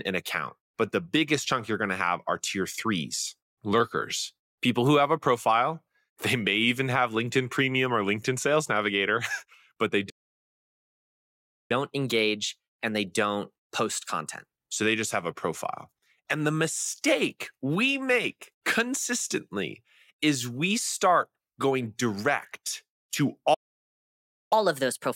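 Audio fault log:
10.09–11.71 s playback stall: after "but they" the speech cuts to silence for about 1.6 s, likely the player starving for data or blocked, then resumes.
11.71–14.71 s catch-up at higher speed: the backlog plays at 1.1× speed, pitch up about a semitone and a half, until "they just have a" settles back to normal.
23.54–24.53 s playback stall: following "start going direct to" the output drops out for about 0.97 s, likely another buffer underrun or blocked playback thread, before continuing.
24.53–25.16 s catch-up at higher speed: the remainder runs at 1.25× speed with pitch raised about four semitones, a steeper resampling catch-up lasting to the clip's end.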